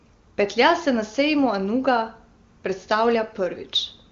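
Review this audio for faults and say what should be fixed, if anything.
Nothing here needs fixing; no faults are audible.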